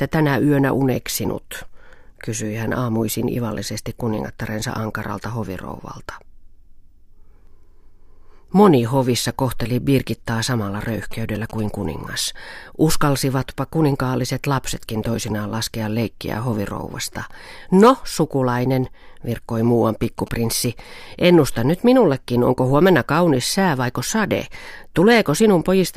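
From 10.88 to 11.60 s, GSM signalling bursts break through beneath the speech: a galloping dit-dit-dit of short buzzes at a 217 Hz rate, roughly 20 dB below the voice. A nearby 2G phone is exchanging brief groups of radio bursts with the network, and the audio circuit rectifies them into sound. A spectrogram shows clusters of evenly spaced vertical lines, a comb of harmonics at multiples of 217 Hz. The same pattern returns from 20.03 to 20.67 s.

Between those two episodes, from 17.83 to 17.90 s, hard clipping crackles on a speech peak for about 70 ms. The signal is overdriven by about 3 dB, more than the stage can pass, so the peaks are cut flat. In the waveform the tops look sheared off at a fixed ceiling. On a spectrogram a brief smear of added harmonics reaches well above the normal speech energy.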